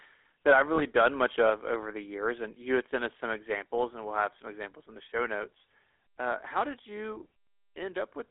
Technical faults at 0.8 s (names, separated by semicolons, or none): GSM full-rate codec; lost GSM frames